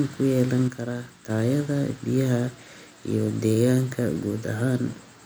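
One channel drops out in this speech clip from 0.68 to 1.30 s, the level falling abruptly by about 6 dB, likely because one stereo side was lost before the mono sum.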